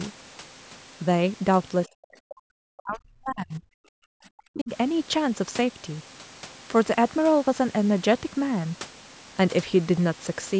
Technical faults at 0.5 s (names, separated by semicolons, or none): none